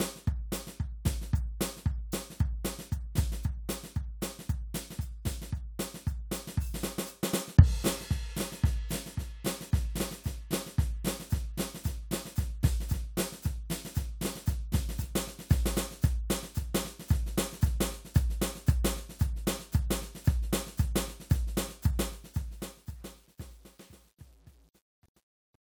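From 21.95 s to the end at 25.73 s, there is truncation distortion on a fade. The fade-out, starting around 22 s, is rendered with too few bits and no dither, which fits a 10-bit word, so the music decays into coarse square steps. From 22.41 s it turns gritty.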